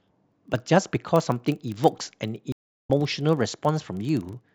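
From the start and throughout the speech, a filter restarted on every block produces a steady buzz at 25 Hz. The filter drops its memory between blocks and begins each one from silence. Each block therefore opens with a small click. The buzz rises and falls with the level of the speech.

At 2.52 s a stream reconnect cuts the sound for about 0.34 s, until 2.90 s. The connection broke and a new decoder started mid-stream. The speech resumes roughly a fifth of a second further on, so a short stretch is skipped.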